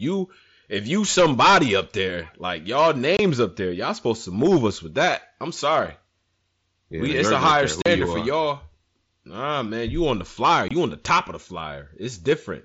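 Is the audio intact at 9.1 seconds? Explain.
Yes, at 9.1 seconds the speech is intact, with no fault at that moment.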